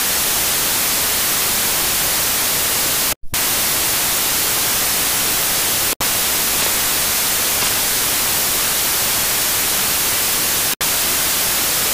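Samples built from the wrong bytes run through the whole clip, from start to finish. The reader has assembled each sample's bytes incorrectly, whether off by one byte, in swapped order or under a different alignment, so the rapidly changing low-order bits end up as the most significant part of every value. What reaches the ear is loud, harsh broadband noise in place of the intended audio, approaching white noise wherever the underlying sound is loud.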